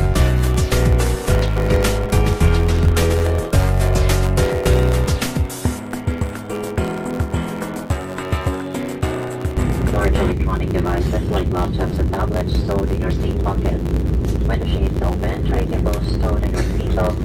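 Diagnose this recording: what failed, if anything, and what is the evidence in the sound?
Block size mismatch (truncated) throughout, at the driver or buffer stage: a 92 Hz buzz and sound running 1.07 times fast with its timbre intact, which fits 512-sample blocks losing their ends.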